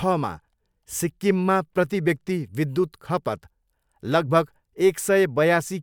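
A speech recording with no technical faults to be heard anywhere in the signal.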